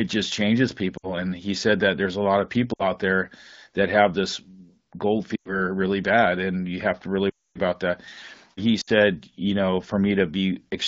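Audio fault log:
0.97–1.13, 2.73–2.88 (after "there's a lot of"), 5.36–5.60, 7.30–7.59 (after "you have to really"), 8.81–8.90 s (before "you know"): lost AMR speech frames. The AMR-WB decoder repeats the last good pitch and vocal-tract settings at falling gain, so the sound smears, then fades. On a spectrogram the harmonics stretch flat; on the waveform the envelope tapers. The longest gap, at 7.30 s, lasts 0.26 s and nearly reaches silence.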